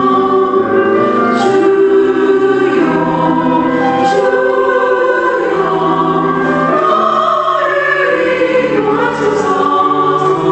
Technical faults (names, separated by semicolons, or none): gain pumping